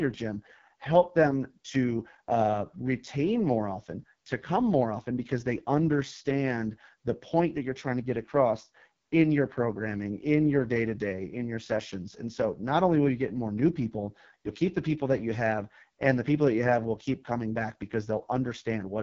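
AMR wideband (HD Voice) codec throughout: bit-starved, fitting its 6.6 kbit/s mode, the speech model renders the speech rough and raspy, with nothing above 7.2 kHz.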